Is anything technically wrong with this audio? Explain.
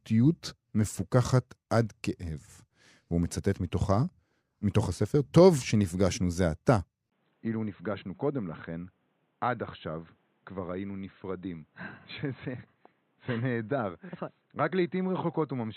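Yes. At 7.10 s the speech suddenly turns dull and boxy and stays that way to the end. Nothing above 4 kHz remains. A 20 ms gap marks the change. The level falls by roughly 10 dB, and a new background noise sits around 40 dB below the speech. This is likely an input switched to a poorer device, such as another microphone or a headset's call profile. That device passes a narrower band and brings its own tone, level and noise.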